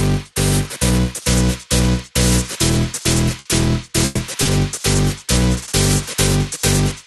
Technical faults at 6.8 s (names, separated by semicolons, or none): none